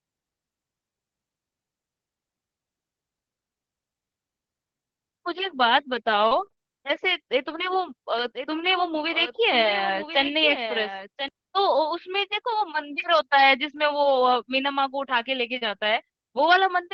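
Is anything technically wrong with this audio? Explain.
Yes. Between 6.27 and 7.54 s the sound turns choppy, with pieces missing. This is repeated packet loss: five gaps, the longest 34 ms, each patched by stretching the preceding sound.

From 8.18 to 11.28 s a second copy of the audio trails about a second behind, about 10 dB quieter, starting and stopping abruptly. This is a doubled audio track, likely from the signal being captured again through a slower path.

A brief smear or wobble occurs at 13.00 to 13.04 s and again at 15.58 to 15.63 s. Both are short concealed packet loss, where the receiver continued the last sound to cover 20 to 40 ms that arrived too late.

Rougher, noisier moments occur at 13.02 s, 14.16 to 14.22 s and 15.61 to 15.67 s, each lasting 20 to 40 ms. These are lost packets rebuilt from error correction, with the decoder playing the lower-quality backup copies carried in the following packets.

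All of this rides on a call path whose 8 kHz bandwidth and Opus coding noise fit a 24 kbps setting.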